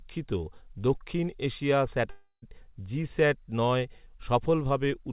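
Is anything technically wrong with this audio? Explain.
Yes. A long network dropout runs from 2.1 to 2.44 s, likely caused by packets ceasing to arrive. The receiver stretches the last sound into a fading buzz for 320 ms, then about 50 ms of silence follows, and the speech resumes with that stretch lost, heard through a call path with nothing above 4 kHz, consistent with a G.711 codec.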